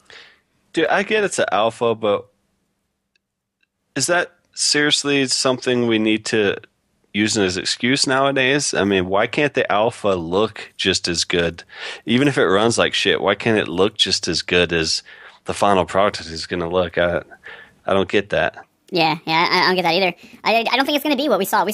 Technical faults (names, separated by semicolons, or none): wrong sample rate